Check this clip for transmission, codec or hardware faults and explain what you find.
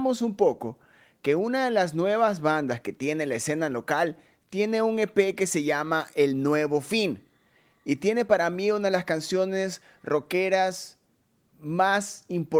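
No transmission, codec or hardware faults can be heard in this speech recording. There is nothing to report.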